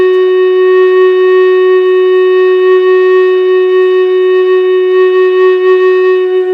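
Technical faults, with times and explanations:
No technical faults can be heard anywhere in the music.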